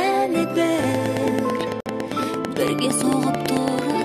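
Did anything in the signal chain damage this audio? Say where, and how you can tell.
Yes. A train of clicks, likely interference reaching the analogue wiring or converter, ticks regularly about nine times a second from 0.84 to 4.02 s, standing well above the sound.

A gap at a join of encoded pieces appears at 1.80 s. Separately encoded segments kept their start delay and end padding, opening a 55.6 ms gap before the sound resumes.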